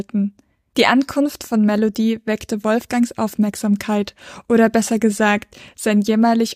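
Nothing in the speech signal points to a technical fault at any moment.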